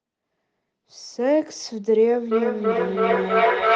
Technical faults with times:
2.31-3.75 feedback howl

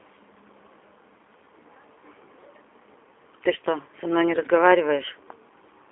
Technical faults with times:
0.00-5.91 G.729 codec

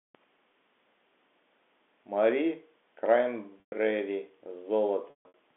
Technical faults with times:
3.60-3.72 packet loss with pitch repetition
5.10-5.34 packet loss with pitch repetition

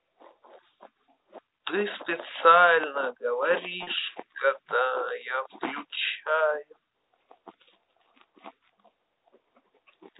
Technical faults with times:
3.83-3.87 packet loss with pitch repetition

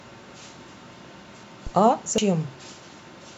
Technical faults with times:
0.68 audio missing between chunks
1.43 audio missing between chunks
1.67-1.72 phantom power thump
2.18 audio missing between chunks

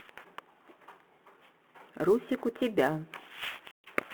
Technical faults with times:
0.00-4.14 sample clock jitter
3.71-3.89 packet loss on an ADPCM call

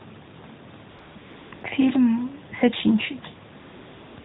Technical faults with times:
0.90-1.64 AMR comfort noise
3.60-4.25 AMR comfort noise

